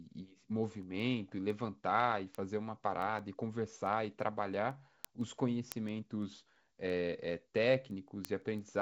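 Speech, and there's a steady train of sharp ticks running right through it, from about 0.16 s to 8.75 s, roughly every 0.15 s, so around fifty of them. That's word clock ticks: the receiving box is free-running on its own clock instead of locking to the sender's. The two clocks are off by something like 150 ppm, so every time they slip a full sample past each other, one sample gets dropped or doubled and you hear a click. Underneath, the G.722 wideband coding is doing its job, with nothing above about 7.7 kHz and a touch of noise that points to the 56 kbit/s mode.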